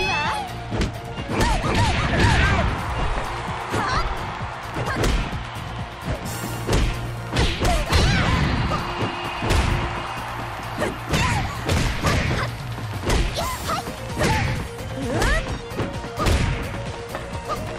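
From 3.57 s to 17.72 s a train of clicks rides over the sound: around seventy similar pops at about 5.8 per second, spaced irregularly and peaking roughly 5 dB above the signal, likely from electrical interference or a faulty connection. Spectrograms show thin vertical broadband lines; waveforms show sharp spikes.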